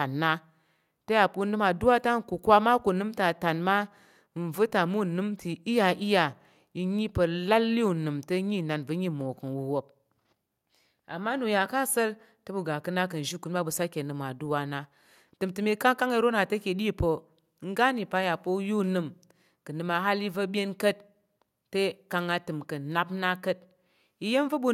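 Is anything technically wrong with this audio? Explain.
No, nothing is technically wrong with this audio.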